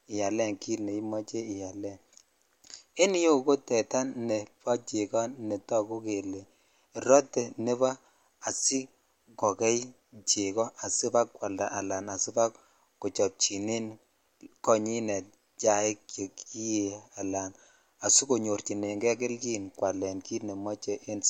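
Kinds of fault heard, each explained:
Nothing stood out on listening to this speech clip.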